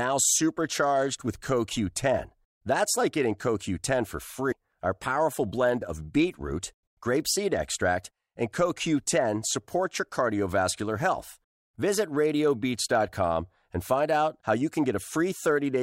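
At 4.51 to 4.53 s, damaged data in a compressed stream: corrupted bytes in the encoded file make the decoder misread or reject frames there and lose sync until it finds a valid frame header, which breaks into the speech as a disruption of roughly 20 ms.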